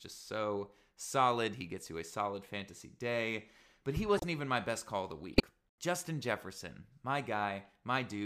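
Two corrupt frames decoded, at 4.15 to 4.24 s and 5.33 to 5.40 s, sit in this speech. In each, damaged bits in a few consecutive compressed frames were decoded as if valid, so misread gains and codes threw energy onto the wrong frequencies. Each comes through as a short chirpy burst, under a tenth of a second long. The first is fairly quiet, peaking around -25 dBFS. The second is much harsher, reaching roughly -10 dBFS.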